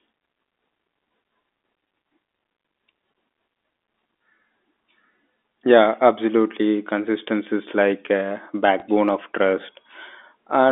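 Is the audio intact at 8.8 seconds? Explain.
No. Right after "like a", from 8.80 to 8.82 s, there is packet loss with the last packet repeated. About 20 ms went missing, which fits a single lost packet, and the receiver replayed the previous packet instead. The repeat is heard as a small blip. On a waveform, a 20 ms stretch duplicates the segment before it.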